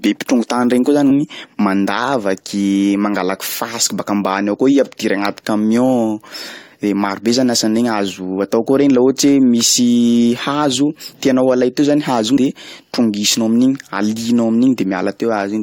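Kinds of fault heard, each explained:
Damaged data in a compressed stream: a few bytes are corrupt, so the decoder misreads those frames and loses sync until it finds the next header. That gives a quick blip at about 1.10 s and another from 12.36 to 12.38 s, just before "de trongisinao".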